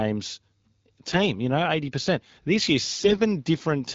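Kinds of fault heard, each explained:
AMR bit errors: the speech holds its pitch and level but turns hoarse and gargly from 1.06 to 1.18 s, just before "you know", and more harshly from 2.97 to 3.19 s. Corrupted, weakly protected frame bits misplace the excitation pulses and skew fine pitch, gain and spectral values.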